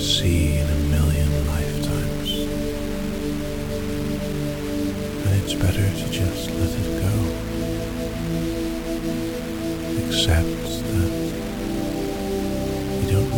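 From start to finish the sound carries a coarse, grainy distortion that shifts with the signal, with quiet passages turning gritty and fading sounds sputtering or dropping out. This is likely low bit depth without dither, with values rounded to roughly 5-bit resolution, leaving error about 15 dB below the signal.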